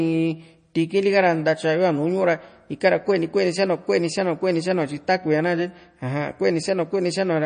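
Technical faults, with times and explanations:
Throughout, MP3 compression: the speech stops dead at 9.4 kHz and sounds watery, likely a starved encoder near 32 kbps dropping treble and weak detail.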